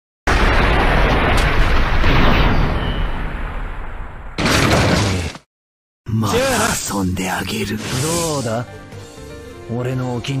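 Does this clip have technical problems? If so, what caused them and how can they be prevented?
No, this clip has no technical problems, so there is nothing to prevent.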